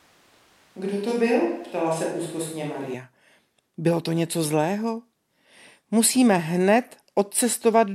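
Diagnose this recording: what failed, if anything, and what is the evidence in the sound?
From the start until 2.94 s the speech sounds roomy, hollow and bass-light, about 5 dB quieter with more room noise, then turns abruptly close and full. This is a switch to a distant microphone, likely a lost close-mic feed in the analogue wiring. A gain or EQ change wouldn't add room reverberation.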